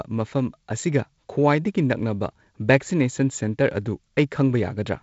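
No technical faults detected.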